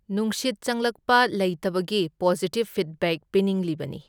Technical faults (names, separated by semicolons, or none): none